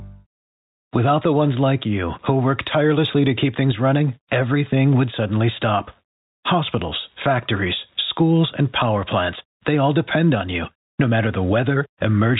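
Gain pumping runs through the whole speech clip. Loud and soft parts end up closer in level, and the sound is squashed. The swing is around 10 dB. The likely cause is input gain set far too high, with a fast limiter clamping each peak.

At 2.25 s, between "the ones like you" and "work tirelessly to keep", there is a packet loss with the last packet repeated. About 10 ms of audio goes missing. The receiver replays the previous chunk, which fits a single lost packet. It sounds like a small blip. The band stays capped at 4 kHz by the G.711 telephone coding.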